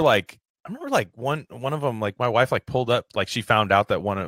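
Nothing in this bit of speech trips any alarm, since no dropouts, clicks, glitches or other faults show up anywhere along the way.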